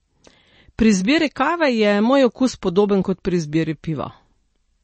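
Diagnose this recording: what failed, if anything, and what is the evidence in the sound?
Codec stage, likely MP3 compression: the speech has no content above 8.3 kHz throughout and plainly audible coding damage, consistent with a bit-starved encoder near 32 kbps trimming treble.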